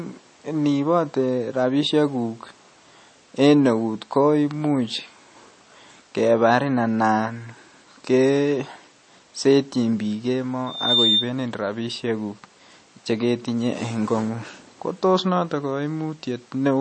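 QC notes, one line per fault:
Throughout: MP3 compression, likely. Nothing above 8.3 kHz and a plainly watery, swirly texture, which fits a low bitrate around 32 kbps starving the encoder.
10.66 to 11.31 s: loudspeaker feedback squeal. A 3.6 kHz tone swells over roughly a third of a second to about 5 dB above the sound as the mic-speaker loop runs away.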